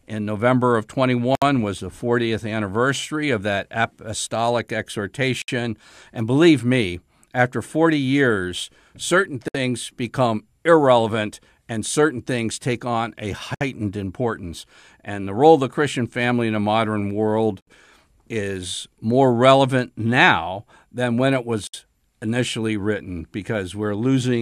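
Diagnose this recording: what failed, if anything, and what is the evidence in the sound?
The codec stage failed, with gaps at joins of encoded pieces. Silences of about 64 to 67 ms cut the speech at 1.35, 5.42, 9.48 (after "years certain", before "become irrelevant and certain"), 13.55 (after "things take on a"), 17.61 and 21.67 s (before "initially written"). The codec smears the edges of each gap. Each separately encoded segment kept its encoder start delay and last-frame padding. Unlike network dropouts, the gaps repeat exactly every 4.0 s, and the speech resumes where it stopped.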